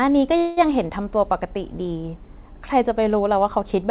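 At 0.38 s the speech stalls in a call audio freeze lasting until 0.59 s. A buzzy hiss stretches the last sound, then fades. Speech resumes where it stopped, nothing lost, now about 0.19 s later. Packets were likely held up, emptying the jitter buffer.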